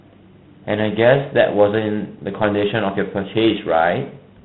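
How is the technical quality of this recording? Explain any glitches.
Technical quality is poor throughout: the speech carries plainly audible G.726 ADPCM damage. Each sample codes only a coarse difference from an adaptive prediction, leaving a rasping hiss that rises and falls with the speech. A steady noise floor would not follow the speech level this way. The grain points to 24 kbit/s, and nothing passes above 4 kHz.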